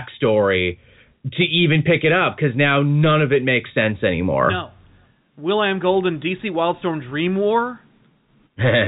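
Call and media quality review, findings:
No faults found on the speech path. Telephone-band G.711 A-law coding is audible as nothing above 4 kHz and a faint quantisation hiss that tracks the speech level, as expected for a working path.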